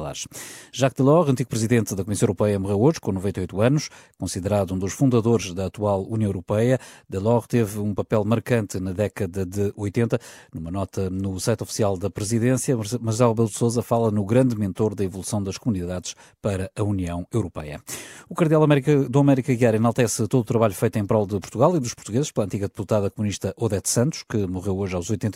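At 21.44 to 21.46 s a single loud pop rises a few decibels above the speech, likely a voltage spike; unlike a dropout, the speech continues underneath.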